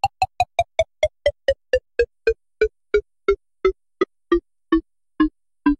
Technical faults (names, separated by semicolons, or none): damaged data in a compressed stream